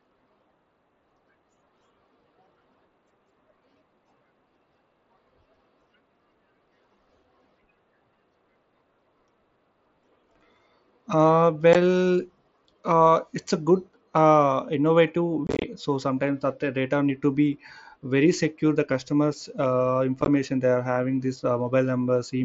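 Short holes with abrupt edges break the speech at 11.73 s, then chop it roughly from 15.47 to 15.64 s just before "so sometimes that the", and from 20.22 to 20.28 s between "secure the customers uh" and "they are having this". This is unconcealed Bluetooth headset packet loss: voice packets on the mSBC link dropped, and silence or an idle pattern filled the gaps.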